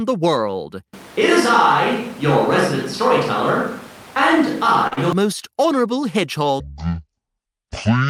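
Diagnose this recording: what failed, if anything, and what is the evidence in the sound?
The capture stage likely lost the close microphone and fell back to a distant one from 0.94 s to 5.13 s. The speech turns roomy and hollow, with thinner bass. The level barely changes, but room noise rises to roughly 25 dB below the speech, then the close sound abruptly returns.

At the network and jitter-buffer stage, a late packet caused a short stall from 4.87 s to 4.93 s. With the buffer empty, the receiver stretched the last sound by 40 ms and then resumed where it left off. Nothing is lost, but the sound hangs unnaturally, and total delay grows by 40 ms.

Immediately after, from 4.93 s to 4.99 s, a short concealed packet loss follows. About 40 ms of audio never reached the decoder, which covered it with 31 ms of extrapolated sound before blending back. The result is a brief smear, and a short sound there may disappear.

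A section at the wrong speed runs from 6.6 s to the end at 8.09 s, most likely from a playback or editing clock mismatch. It plays at half speed, so pitch and tempo drop together. The speech turns deep and dragging, roughly ten semitones lower.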